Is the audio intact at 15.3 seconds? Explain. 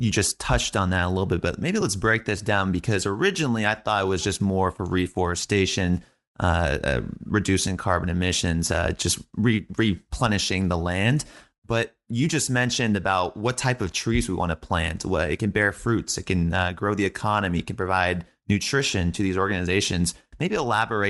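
No. At 15.3 seconds the speech carries a breathy, grainy edge in its upper range, a fault present through the whole clip and likely Bluetooth LC3 compression. That transform codec works in short blocks, here consistent with 7.5 ms frames, and at a moderate rate, one that fits roughly 48 kbps, it discards much of the upper spectrum and refills it with synthetic noise. That substitution is what leaves the plainly audible grit on the speech at this moment.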